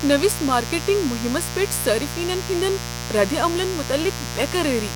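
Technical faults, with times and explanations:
Throughout: mains buzz. There's a steady, raspy buzz under the speech, and it's loud, only around 10 dB below the talking. It's locked to a 60 Hz supply. Something like a dimmer, a rectifier or an unshielded cable is letting sharp switching spikes into the signal on every half-cycle, so 120 times a second. Those spikes aren't smooth hum. They spray harmonics of 60 Hz up into the kilohertz range, and that's where the edgy, gritty texture comes from.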